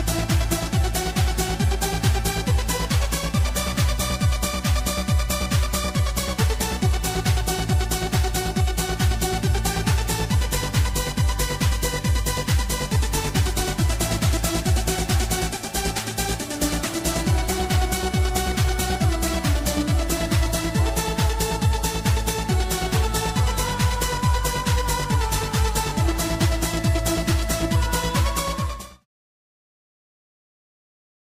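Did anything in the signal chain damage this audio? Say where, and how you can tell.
No, nothing in the chain damaged it; the only level change is a smooth fade-out from about 28.5 s to 29.07 s, a deliberate edit with no click or hard edge.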